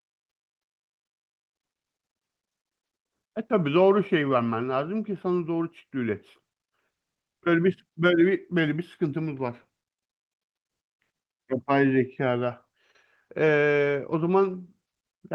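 Nothing goes wrong anywhere in this speech recording; it just sounds like an ordinary call, with the top end easing off around 12 kHz the way a call codec at a modest bitrate would leave it.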